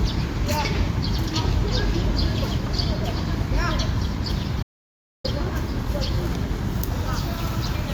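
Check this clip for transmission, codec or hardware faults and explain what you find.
One fault appears: an audio dropout to silence. From 4.63 to 5.24 s, the sound cuts to total silence for about 0.62 s. The input was likely lost while silence was still written.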